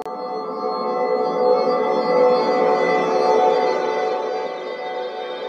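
Nothing technically wrong can be heard in the audio. Its level rises and falls smoothly, the way a fader would move it.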